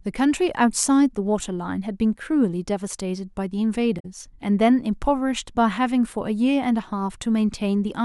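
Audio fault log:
3.99–4.05 s, damaged data in a compressed stream: a short glitch breaks into the speech for about 70 ms as corrupted bytes throw the decoder off its frame boundaries, so it misreads that stretch before locking onto the next valid frame header and resuming.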